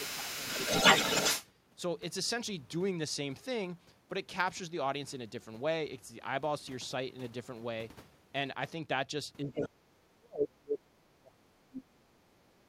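From the start to 1.47 s, a second voice comes through alongside the talker, the other side's voice leaking through, and at times it sits a few decibels louder than the talker. The likely cause is an echo canceller that left part of the loudspeaker signal in the microphone feed. On a spectrogram, a second set of harmonic traces crosses the talker's own, with a different pitch contour.

Within that stretch, from the start to 0.48 s, the talker's speech is suppressed in double talk. For around a third of a second it dips only slightly, by a few dB, likely as the canceller turns the talker down along with the echo. On a waveform this appears as a shallow notch in the envelope.

From 9.43 to 12.67 s the same suppression is much heavier, close to 30 dB at its deepest across about three seconds. The talker fades deeply. A brief scrap of leakage at 9.51 to 9.69 s sits below the talker's level.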